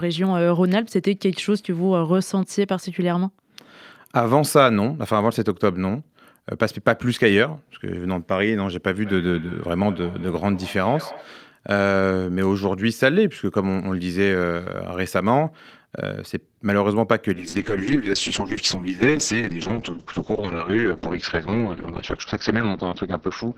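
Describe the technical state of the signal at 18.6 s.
At 18.6 s the signal sits inside a call bitrate drop that begins at 17.35 s and runs to the end of the clip. The call's bandwidth estimate collapsed, so the encoder was pushed from 48 kbps down to 6 kbps and held at that floor for about 5.7 s. Coding this coarsely, it also narrowed the audio band from 20 kHz to 6 kHz, so the speech sounds muffled, rough and watery, with its crisp upper detail gone.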